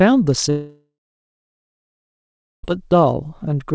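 From 0.50 to 2.65 s, a long network dropout likely cut off incoming audio; the speech smears into a fading buzz or hiss, then silence, and that stretch is lost.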